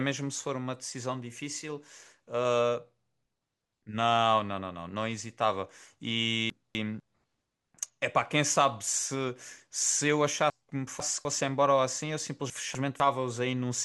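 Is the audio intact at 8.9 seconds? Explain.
Yes, the speech at 8.9 seconds is intact, with no dropout, glitch or other fault at that moment.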